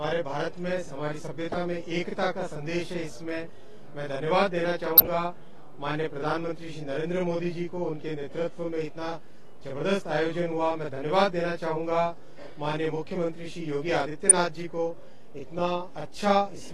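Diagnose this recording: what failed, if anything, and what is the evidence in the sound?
A channel delay (doubling) runs through the whole recording, at the driver or buffer stage. One channel arrives 40 ms behind the other, and the two are summed to mono, so every onset is followed by an equal-level copy that sounds like a tight slap or doubling. On a waveform, each transient appears twice, 40 ms apart. On a spectrogram, closely spaced comb-filter notches run across the whole band, about 25 Hz apart.

At the codec stage, corrupt frames were decoded at 1.52–1.54 s, 4.97–5.07 s, 14.25–14.31 s and 15.54–15.59 s. Each is a short chirp or noise burst lasting a few frames. The first and last peak around −20 dBFS, while the middle two are about 20 dB stronger. The decoder played damaged frames whose flipped bits misplaced energy in frequency. On a spectrogram these show as brief, frame-aligned blocks of bright, misplaced energy. 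On the waveform they appear as sudden spikes, strongest at 5.0 s and 14.3 s.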